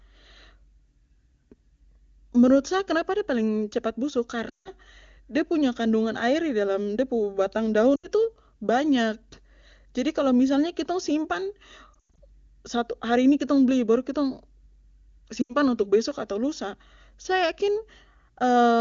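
Lost AMR speech frames occur at 4.50–4.72, 7.96–8.08, 11.94–12.18 and 15.42–15.55 s. The wideband decoder conceals each failed frame by repeating prior speech parameters at falling gain, so the speech smears, then fades and recovers roughly, against otherwise clean HD Voice.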